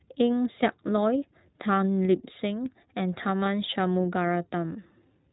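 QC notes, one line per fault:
throughout, iLBC codec: the band stops at 4 kHz and the speech has a plainly rough, synthetic edge, consistent with 20 ms iLBC frames near 15 kbps.
3.44–3.48 s, lost iLBC frame: about 20 ms of audio missing, consistent with one dropped frame; the decoder repeats the last pitch cycle with noise, giving a brief buzzy hold before recovering.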